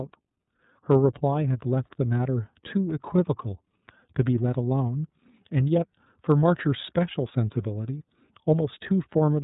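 Speech runs through the iLBC codec throughout, its narrowband coding consistent with the 30 ms frame mode at around 13.3 kbps. Nothing above 4 kHz survives, so the voice sounds muffled and telephone-like, with a plainly audible rough, slightly synthetic edge. Lost iLBC frames occur from 7.98 to 8.02 s. A gap of about 30 ms, consistent with a single dropped frame, was filled by the decoder repeating the last pitch cycle blended with noise. It is heard as a brief held, slightly buzzy or breathy vowel before the voice snaps straight back.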